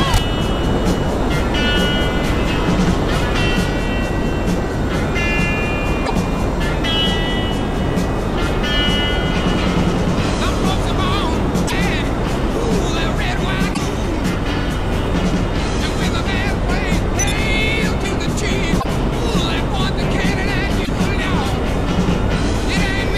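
Five short glitches turn up, at 6.02 to 6.11 s, 11.64 to 11.72 s, 13.70 to 13.79 s, 18.77 to 18.85 s and 20.81 to 20.89 s, each roughly 80 ms long. They're damaged data in the compressed stream: bad bytes trip up the decoder, which misreads those frames, loses its place and hunts for the next valid header. You hear each one as a quick glitch before the sound picks back up.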